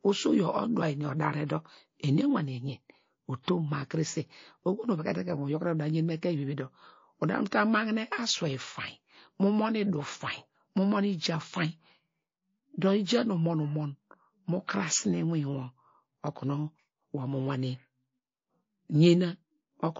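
MP3 compression runs through the whole of this speech clip and is plainly audible, likely from a low-bitrate encode; the thin, watery quality fits a rate around 32 kbps, where the encoder drops treble and lets weak frequency lines flicker between frames. Pre-echo appears at 1.47 to 1.50 s, just after "eni odare", and at 3.43 to 3.48 s, just before "ma krese oho nu". Each time a hiss rises about 14 dB, then about 21 dB, over 31 ms and 49 ms ahead of a sharp onset. This fits long transform blocks of about 72 ms with no switch to shorter ones, so noise meant for the attack spills into the quiet before it.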